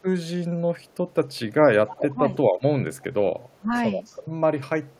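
Around 0.86 s there's a faint echo leak: a delayed copy of the speech, about 308 ms late, most likely from a far-end speakerphone whose echo canceller let some through. At 1.88 s it comes back nearly as loud as the talker. Right after, at 2.09 s and again at 3.56 s, the speech suppressed in double talk shows up as deep dips of around 150 ms, likely the canceller clamping down while both sides overlap. The echo returns faintly at 2.97 s and 4.05 s and very faintly at 4.85 s.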